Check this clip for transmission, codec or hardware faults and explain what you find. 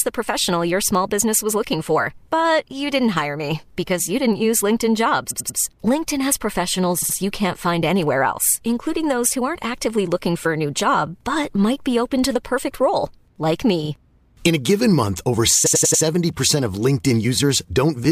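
Yes, there are repeated frames in four places. From 5.30 to 5.58 s, a 92.9 ms block plays three extra times. From 7.01 to 7.15 s, just before "you can't find anywhere", a 69.7 ms block repeats twice. After "the perfect role like", at 13.84 to 13.89 s, a 46.4 ms block repeats once. After "a given month over", at 15.65 to 16.02 s, a 92.9 ms block repeats four times. These block lengths fit runs of two to four compressed frames.

A run of encoded frames was delivered again, so the decoder replays the same slice, and the clip grows by about 0.84 s. Each one sounds like a mechanical stutter. On a spectrogram it shows as identical patterns repeated side by side. The waveform shows the same copied shape.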